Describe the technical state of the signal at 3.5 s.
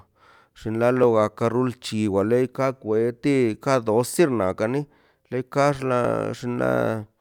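At 3.54 s the speech has an overlapping-chunks fault. A processing chunk of about 2.5 s ends there, and the next chunk starts slightly before the previous one finished, so about 6.5 ms of audio plays twice. The doubled sliver is heard as a brief click or stutter. On a waveform, a short stretch of cycles repeats with a discontinuity at the seam. A spectrogram shows a thin vertical broadband line at that instant.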